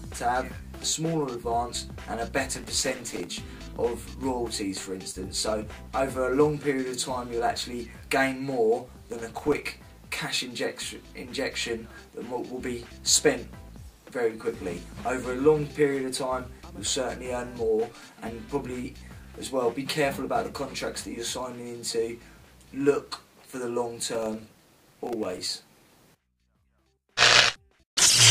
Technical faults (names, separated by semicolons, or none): processor overload crackle